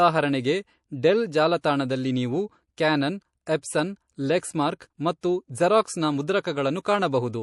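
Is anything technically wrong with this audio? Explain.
Yes. Throughout the speech, the sound is watery and swirly, with chirpy s sounds. This is likely MP3 compression at a low bitrate, around 48 kbps, which lets weak frequency lines flicker on and off between frames.

Pre-echo occurs at 1.61–1.64 s, 5.21–5.23 s and 6.83–6.85 s. A hiss rises about 18, 23 and 13 dB, lasting 22–28 ms before each sharp attack, because quantisation noise spreads across long blocks that never switch to short ones. Unlike the steady swirl, it comes just ahead of an attack.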